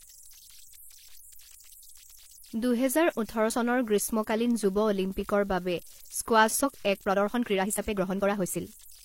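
Throughout the clip there are converter idle tones: whistles around 7 kHz sitting in the pauses, with grainy noise under the quieter speech, about 26 dB below the signal. A delta-sigma converter running without dither settles into repeating bit patterns when its input is small, and those patterns produce tones. On a spectrogram this appears as a thin horizontal line near 7 kHz, clearest in the gaps, with a speckled noise floor beneath the speech.

At 1.16 to 1.20 s and again at 6.60 to 6.64 s there is damaged data in a compressed stream. Each spot gives a short squawk or blip. Corrupted bytes made the decoder misread its frames and lose sync until it found the next valid frame header. The waveform shows an abrupt discontinuity at each point, and the spectrogram shows a brief vertical smear of broadband energy about 35 to 45 ms wide.

From 6.99 s to the end the speech suddenly runs about 1.45 times faster while the pitch stays the same, and it sounds rushed. 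This is likely a time-stretched section, where software squeezed the audio by dropping short pieces to keep the pitch. Syllables and gaps look compressed in time on the waveform, while the harmonic spacing on the spectrogram stays unchanged.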